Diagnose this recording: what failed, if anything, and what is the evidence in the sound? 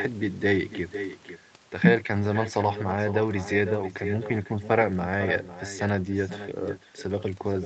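Every phrase is trailed about half a second later by a thinner copy roughly 9 dB down: echo with no canceller, the far-end loudspeaker feeding its microphone unremoved.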